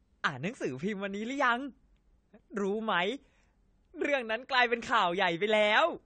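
Throughout, the speech sounds dull and smeared, with nothing above 9 kHz and a warbling, fizzy texture on sibilants. This is AAC compression, likely AAC-LC at a rate fitting 32 kbps, coarsely quantising the spectrum and dropping the top band.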